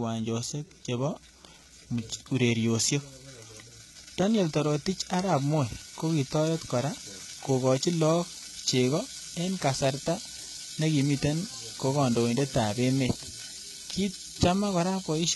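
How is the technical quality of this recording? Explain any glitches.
Technical quality is poor, with heavy codec damage across the whole speech clip. Throughout, s sounds turn gritty and lispy, likely from HE-AAC compression at a very low bitrate, around 16 kbps. Treble is rebuilt from copied lower bands, so it stays bright but misaligned, unlike the dull, muffled top of plain low-pass coding.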